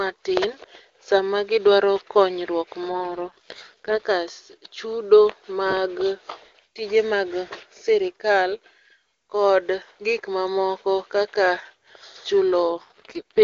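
Speech over an HD Voice wideband call shows two AMR rate drops, from 2.9 to 4.04 s and from 12.7 s to the end. In each, the voice turns rough and synthetic, which fits the link forcing AMR-WB down from its 23.85 kbit/s mode to 6.6 kbit/s to spend bits on error protection. Unlike a fallback to narrowband or packet loss, the bandwidth holds and nothing drops out; only the texture degrades.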